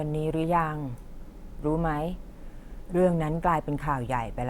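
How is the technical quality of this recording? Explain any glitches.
Nothing in the recording stood out as a glitch or technical problem on listening.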